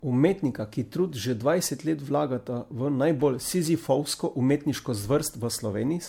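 From start to end, the speech sounds swirly, hollow and smeared, with blurred attacks. This is likely generation loss from repeated MP3 encoding, fitting about five passes at 96 kbit/s.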